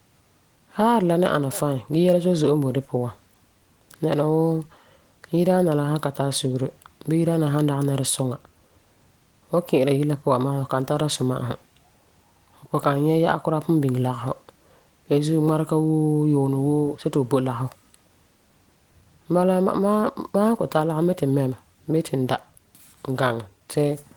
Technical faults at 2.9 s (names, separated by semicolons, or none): none